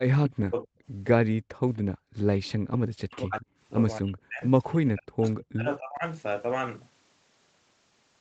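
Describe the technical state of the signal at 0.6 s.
At 0.6 s the speech is still inside a stretch of speech suppressed in double talk that runs from 0.04 to 0.67 s. The level drops by up to about 40 dB, about half a second affected in all. The likely cause is an echo canceller mistaking the talker for loudspeaker echo while both sides spoke, and turning everything down. On a waveform the envelope sinks. A spectrogram shows fading bands below the 8 kHz call-band ceiling.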